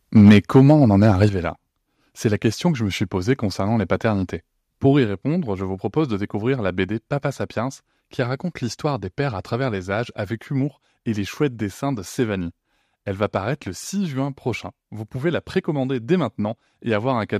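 From 0.16 to 1.25 s the loudest syllables crackle harshly with flattened tops. This is microphone overload, likely from input volume set too high, driving peaks about 5 dB past the converter's limit on a few percent of samples. Unlike a level change, it adds distortion rather than just loudness.

The microphone volume stepped down at 0.29 s (about 2 dB), 1.29 s (about 6 dB) and 5.07 s (about 3 dB, just before "je vous propose de"). Each is a sudden drop in voice and background together, the likely mark of software cutting input gain after the clipping.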